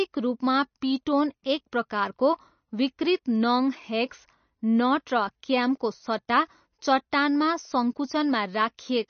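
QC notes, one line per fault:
Throughout: MP3 compression, likely. Nothing is heard above 6.4 kHz, so the speech sounds dull and muffled. Plainly audible watery swirl comes from weak frequency lines dropping in and out between frames. The damage fits a bitrate around 32 kbps.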